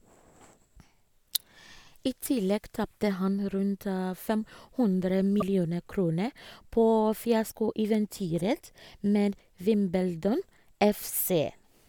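Speech, with two brief glitches at 5.40 to 5.42 s and 7.49 to 7.52 s. Each is about one 26 ms MP3 frame long. The sound skips forward and a chirp, a burst of noise or a short hole replaces the expected signal. On a spectrogram each shows as a thin vertical break in the harmonic bands. The waveform shows a jagged discontinuity. The likely cause is a broken MP3 bit reservoir, where a frame after a cut borrows bits that no longer belong to it.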